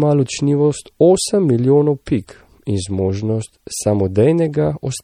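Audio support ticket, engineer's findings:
Watery, swirly texture on the speech throughout, plainly audible. Likely MP3 compression, fitting roughly 48 kbps: weak frequency lines toggling frame to frame. A plain low-pass would dull the sound without the swirl.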